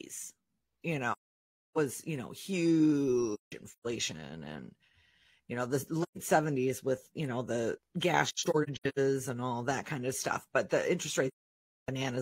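Speech drops out five times from AAC frame loss with muting, at 1.12–1.78 s, 3.34–3.86 s, 6.02–6.18 s, 8.28–8.98 s and 11.28–11.89 s. Missing frames decode as zeroed spectra, giving soft-edged silences. The second and fourth gaps are broken into short scattered holes.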